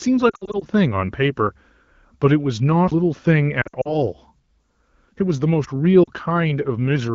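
Between 0.29 and 0.65 s the speech breaks up from lost AMR speech frames. Radio errors corrupted the frames, so the decoder filled each gap by repeating its last good pitch and vocal-tract settings at falling gain. About 160 ms of audio is lost in scattered pieces, the longest lasting 60 ms, which fits a string of 20 ms frames. The result is a warbling, smeared stretch with short fades.

At 2.91 s a CD skip interrupts the audio. The player's laser jumped to a different turn of the disc's spiral, muted for a very short moment of around 10 ms, and resumed from another point. It sounds like a tick followed by an abrupt jump in the speech.

From 3.61 to 4.07 s the lost AMR speech frames return. About 140 ms is missing, spread over roughly 240 ms, with the longest run again 60 ms. The concealment gives the same warble, fading quickly toward silence, before the speech recovers, briefly thin and rough. 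At 6.03 to 6.09 s a shorter loss of about 40 ms produces a quick dip. Around these gaps the AMR-WB coding is clear, which fits a rate of 12.65 kbit/s.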